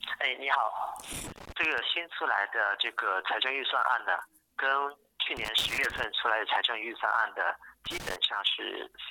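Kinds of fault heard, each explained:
Loose connector crackle: irregular bursts of scratchy crackle at 1.13–1.79 s, 5.37–6.04 s and 7.86–8.16 s, where a worn contact intermittently chops the signal.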